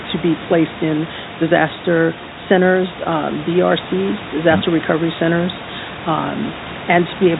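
No technical faults can be heard in this recording.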